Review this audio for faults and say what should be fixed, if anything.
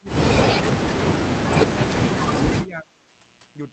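Mains buzz runs through the whole clip, a raspy 60 Hz buzz sitting about 25 dB below the speech. Sharp switching spikes from a dimmer, rectifier or unshielded cable repeat twice per mains cycle and stack harmonics high into the band. Use shielded, grounded cabling and keep the microphone chain away from dimmers and switching supplies.

Speech suppressed in double talk cuts the speech at 0.0–0.16 s, 0.82–0.86 s and 2.65–3.13 s, with dips of roughly 15 to 25 dB. The likely cause is an echo canceller that could not separate the near talker from loudspeaker echo while both sides spoke, so it attenuated everything. Tune the canceller's double-talk detection or use a headset so echo never reaches the microphone.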